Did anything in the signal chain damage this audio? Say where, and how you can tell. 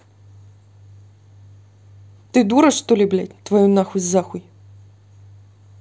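No, nothing in the signal chain damaged this audio.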